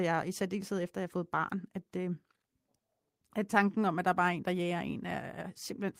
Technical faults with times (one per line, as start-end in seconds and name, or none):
none